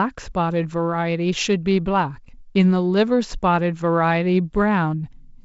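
Nothing's actually wrong with this speech clip: it's simply G.722 wideband telephone coding at 56 kbit/s, with the sound stopping around 7.7 kHz and just the light graininess that codec leaves at that rate.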